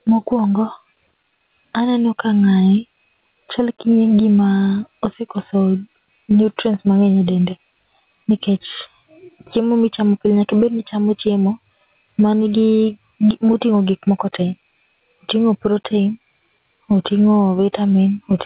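Speech throughout, with the gain ducking about 15 dB under louder sounds: gain pumping, likely from excessive input gain hitting a fast limiter. Nothing is heard above 4 kHz, which fits a G.711 call path.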